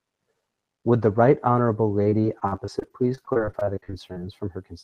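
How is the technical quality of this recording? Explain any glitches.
The speech has clear trouble in its back half. It has the slightly dulled top end of a call codec, with content running up to about 12 kHz.

From 2.03 to 4.20 s there's repeated packet loss, giving that robotic sound. Over twenty short holes open up, the longest about 43 ms. Each one gets patched by stretching the last bit of audio. About a fifth of that stretch is papered over, so it comes out choppy, with pieces missing.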